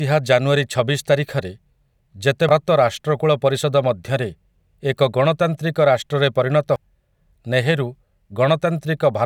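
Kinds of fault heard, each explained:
Damaged data in a compressed stream: part of the encoded speech arrived wrong, so the decoder misread the affected frames, lost its place and had to hunt for the next valid frame header before carrying on. Each time this leaves a short blip in the speech, once at 2.49 s, just before "ରାଷ୍ଟ୍ରକୁଳ ପରିଷଦ ମଧ୍ୟରେ", and again at 6.76 s, right after "ଏକ ଗଣତାନ୍ତ୍ରିକ ରାଷ୍ଟ୍ରରେ ପରିଣତ".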